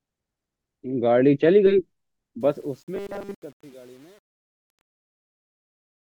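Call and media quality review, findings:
Truncation distortion on a fade, 2.41 to 6.01 s. The gain stage on the fade-out appears to keep only 8 bits and add no dither. As the level drops, the speech waveform collapses into coarse square steps. The sound turns gritty from 2.41 s and is worst from 2.88 s to the end.

Robotic sound from repeated short buffers, 2.95 to 3.34 s. The likely cause is audio arriving too seldom at the playout stage, which fills the gap by looping its last short buffer while the real audio is dropped. Essentially the whole stretch is repeated material. The loop imposes a rigid 200 Hz buzz, which fits a 5 ms buffer, and the speech comes out metallic, only roughly following its original contour.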